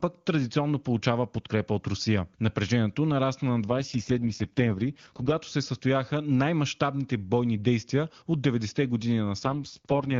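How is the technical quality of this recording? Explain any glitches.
The recording has two stretches where the speech quality drops: from 3.68 to 5.38 s, and from 9.43 s to the end at 10.2 s. Both are an AMR rate drop. A weak radio link made the network push the AMR wideband (HD Voice) codec down from a rate that sounds like its 23.85 kbit/s top mode to what fits its 6.6 kbit/s bottom mode, spending the freed bits on error protection. The speech turns rough, raspy and synthetic, then clears when the rate recovers after 5.38 s. Unlike packet loss, there is no gap, and unlike a fallback to narrowband, the bandwidth stays the same.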